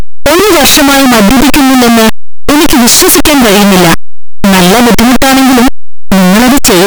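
From start to finish the speech is smothered in very loud, harsh distortion, with soft sounds as loud as strong ones. The likely cause is signed and unsigned mixed up in the 8-bit samples: the top bit flips, so each zero crossing leaps across the full range.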